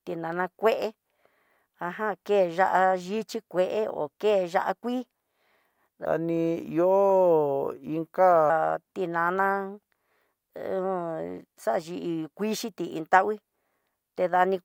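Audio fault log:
6.05 to 8.50 s, section at the wrong speed: the speech suddenly runs at 0.848 times its proper rate and drops about three semitones, likely from a clock mismatch.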